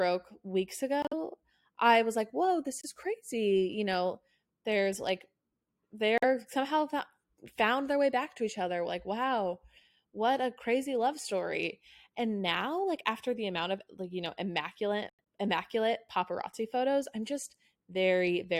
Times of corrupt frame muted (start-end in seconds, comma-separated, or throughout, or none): 1.02-1.14, 2.81-2.85, 6.18-6.23, 15.09-15.20